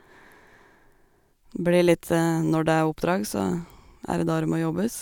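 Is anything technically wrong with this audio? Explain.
No, there is nothing technically wrong with this speech recording.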